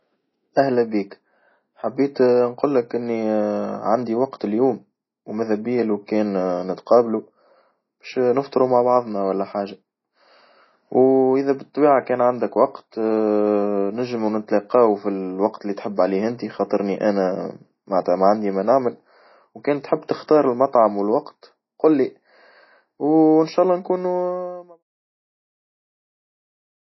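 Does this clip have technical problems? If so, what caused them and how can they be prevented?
Yes. MP3 compression damage runs through the whole clip, likely from a very low bitrate that fits something around 24 kbps. Nothing survives above 5.8 kHz, and weak frequency lines flicker between frames, giving that thin, watery swirl. Encoding at a higher bitrate or keeping a lossless master prevents it.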